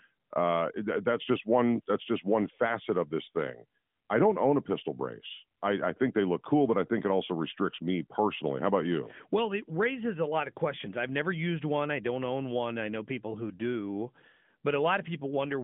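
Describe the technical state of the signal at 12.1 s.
At 12.1 s the speech is intact, with no fault present, and it carries the band-limited sound of the AMR narrowband mobile codec path, which passes nothing above roughly 3.7 kHz.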